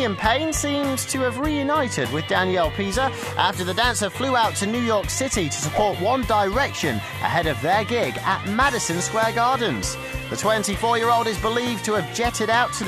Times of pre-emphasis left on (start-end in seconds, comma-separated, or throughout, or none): none